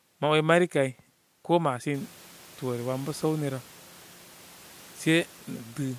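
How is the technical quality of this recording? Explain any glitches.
No glitches are audible; the one change is the room's background noise stepping up by about 17 dB at roughly 2 s, which still sits about 28 dB under the speech and belongs to the recording space, not the signal chain.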